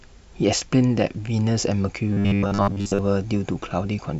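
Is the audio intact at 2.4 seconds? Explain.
No. From 2.13 to 2.99 s there is robotic sound from repeated short buffers: a rigid 100 Hz metallic buzz, likely from re-looping 10 ms of audio, with most of the real audio skipped. The waveform shows identical 10 ms cycles, and the spectrogram shows evenly spaced 100 Hz harmonic stripes.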